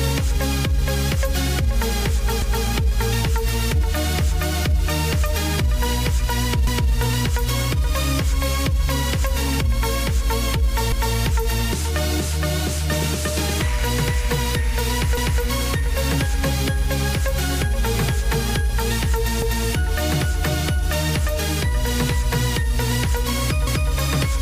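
The audio was cut into 4-second chunks that were joined with overlapping chunks, each one starting before the previous one ended, so 250 ms of sound plays twice at every seam. The repeat falls at 2.42, 6.67, 10.92, 15.17, 19.42 and 23.67 s, roughly every 4.25 s. Each lasts a quarter of a second and sounds like a brief stutter or skipped-back jolt, often with a click at the splice.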